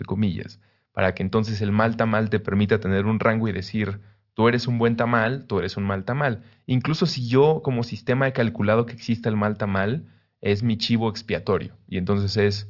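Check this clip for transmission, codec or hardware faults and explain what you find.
Nothing here points to a transmission, codec or hardware problem; the speech comes through without anything worth flagging.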